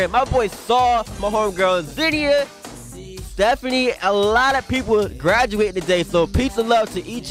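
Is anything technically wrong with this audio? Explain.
No, nothing is technically wrong with this audio.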